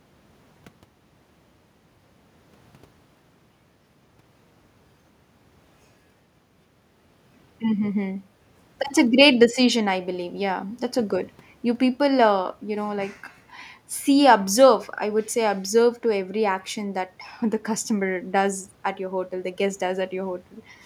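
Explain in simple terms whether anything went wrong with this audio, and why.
Nothing stood out on listening to this speech recording; it came across as an ordinary recording with no problems to point to.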